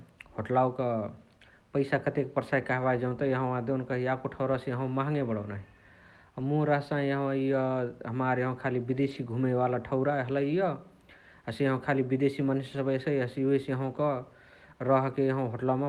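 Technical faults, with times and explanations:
2.79–2.85 s, 8.99–9.17 s, 10.41–10.55 s, 12.73–12.79 s and 13.83–13.97 s: lost packets rebuilt from error correction. Each patch lasts 40 to 100 ms. There is no gap. The speech turns briefly rough and noisy, because a low-bitrate backup copy from the next packet fills each loss.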